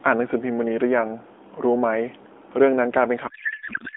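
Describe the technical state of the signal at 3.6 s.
At 3.6 s the speech has given way to garbled noise and warble that barely tracks it, from 3.28 s through to the end of the clip at 3.97 s. This is a codec payload misread. The AMR narrowband frames were packed in octet-aligned form but are being unpacked as bandwidth-efficient, so each field is read from the wrong bit position. The decoder still receives frames that look valid, and it synthesises nonsense from them.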